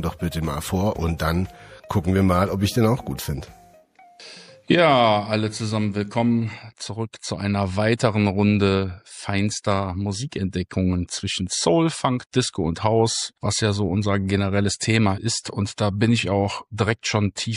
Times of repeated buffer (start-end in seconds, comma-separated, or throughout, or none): none